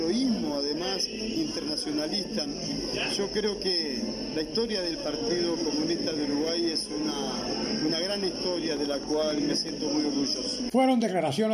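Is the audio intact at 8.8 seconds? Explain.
No. From 8.77 to 9.70 s a train of clicks, roughly seven uneven pops at about 7.6 per second peaking about 5 dB above the sound, likely comes from electrical interference.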